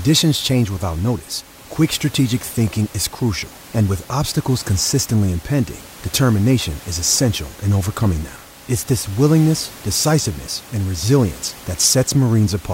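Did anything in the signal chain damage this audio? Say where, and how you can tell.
No, nothing in the signal chain damaged this speech.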